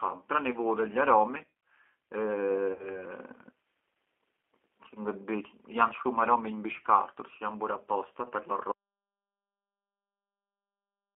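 From the start the speech carries G.729 codec damage, clearly audible across the whole clip. The sound is confined to a telephone band of roughly 250 Hz to 3.4 kHz, so it is thin and lacks both low body and high detail. Because the decoder rebuilds each 10 ms frame from a vocal tract filter, a pitch predictor and a few pulses, the voice has a rough, slightly synthetic texture consistent with an 8 kbit/s G.729A stream.

From 2.73 s to 3.03 s there is VoIP packet loss concealed by the speech codec. About 60 ms of audio went missing, which fits two lost packets. The decoder filled the gap by extending its last pitch and filter settings at falling gain, so the speech smears into a buzzy tone or coloured noise that fades. Since each frame depends on the one before, the voice stays weakened and distorted until about 3.03 s, well after real data resumes.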